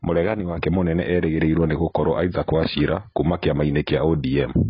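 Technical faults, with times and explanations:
Throughout, AAC compression: speech sounds dull and smeared, and a spectrogram shows nothing above 5.3 kHz, fitting heavy coding by likely AAC-LC near 16 kbps.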